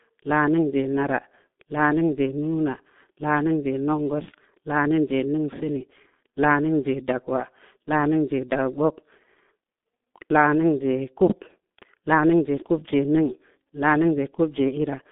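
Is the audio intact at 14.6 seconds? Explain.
No. At 14.6 s the sound is damaged by the G.723.1 codec, which runs through the whole clip. This low-rate telephony codec models speech in coarse 30 ms frames. The sound points to a rate near 6.3 kbit/s. The line band spans roughly 200 Hz to 3.6 kHz, and nothing is heard above 3.8 kHz. The damage is heavy. Speech here sounds muffled and hoarse. Consonants are smeared.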